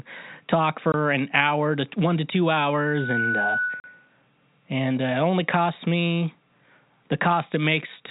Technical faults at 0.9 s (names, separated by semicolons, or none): packet loss filled with silence